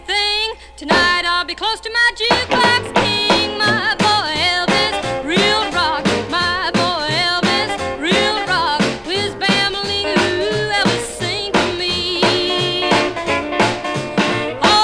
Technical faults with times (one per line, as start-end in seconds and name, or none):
none